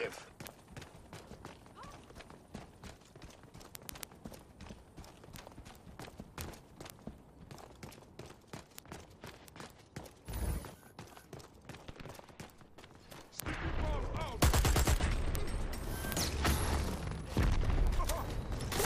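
From 0.12 s to 18.85 s the audio carries word clock ticks. A digital link is read by a receiver on its own unlocked clock, off by a few hundred parts per million. Each slip drops or repeats a sample, producing ticks of uneven strength roughly every 70 ms, some three hundred in all.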